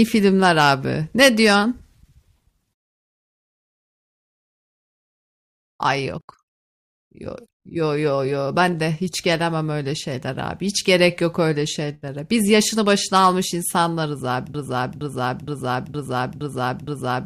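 At 14.54 s the speech locks into a broken-record loop. A fragment about 0.47 s long plays again and again, back to back, six times. It runs to the end of the clip. Each pass is an exact copy, so the sound stutters mechanically instead of moving on. Whatever should have followed is simply missing. The likely cause is a stall in the player, encoder or stream, which kept resending the last piece it held.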